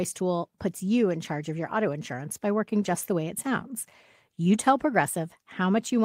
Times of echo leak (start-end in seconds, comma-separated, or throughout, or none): none